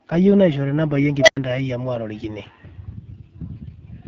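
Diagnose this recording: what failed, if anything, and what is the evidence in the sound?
The codec stage is the culprit throughout. It's AMR wideband (HD Voice) squeezed hard: the speech sounds rough and raspy, and nothing reaches above 7.7 kHz. That plainly audible coarseness fits one of the low AMR-WB rates, around 8.85 kbit/s, where the vocal-tract model runs short of bits.

There's also an unstable filter, likely somewhere in call processing, from 1.19 to 1.37 s. A tone around 700 Hz swells to full level in about 83 ms, the recursion blows up, and then about 90 ms of dead silence follows before the filter resets.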